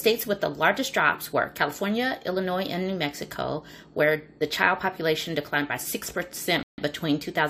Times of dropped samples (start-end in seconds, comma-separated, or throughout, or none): 5.98